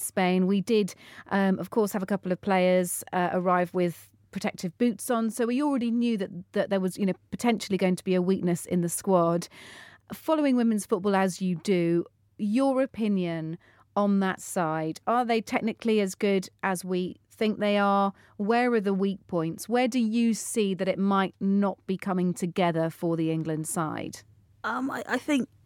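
No technical faults can be heard anywhere in the recording.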